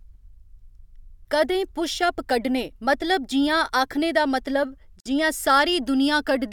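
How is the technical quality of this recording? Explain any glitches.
The recording has one glitch. At 5.00 to 5.06 s, just after "जियां आखने दा मतलब", there is a gap at a join of encoded pieces. Separately encoded segments were joined untrimmed, so encoder delay and last-frame padding stayed in. The result is a 52 ms gap with smeared edges, so the actual silence is shorter, before the speech resumes where it stopped.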